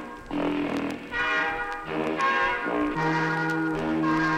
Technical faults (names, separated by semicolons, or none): none